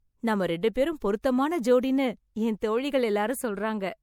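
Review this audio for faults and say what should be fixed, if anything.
Generation loss runs through the whole speech clip. The sound is swirly and hollow, with smeared consonant attacks and a watery texture that is worse than a single lossy encode would leave, even though content still reaches about 20.4 kHz. The likely cause is repeated MP3 encoding, a few passes at a rate consistent with 96 kbit/s. Each pass requantises on a shifted frame grid, so noise and spectral gaps accumulate. To prevent it, keep a lossless master and encode to MP3 only once, at the final step.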